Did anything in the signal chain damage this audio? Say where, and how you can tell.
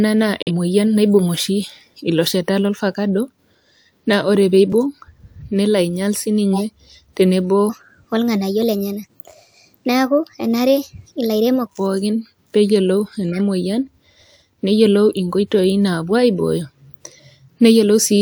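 Yes. Corrupt frame muted at 0.43–0.51 s, in the codec: a 80 ms hole opens abruptly where the decoder rejected damaged frames and playback substituted silence.

Block of digital silence at 4.72 s, right after "naa ore pee", at the driver or buffer stage: a 2.7 ms dropout, fitting one unfilled 128-sample buffer.

Corrupt frame decoded at 6.54–6.63 s and 13.32–13.39 s, just after "pookin pee eyiolou", in the codec: flipped bits were decoded anyway, leaving brief stretches of misplaced spectral energy.

Section at the wrong speed from 7.70 to 11.66 s, at playback: audio runs 1.2 times fast, pitched about three semitones high, likely from being clocked at the wrong rate.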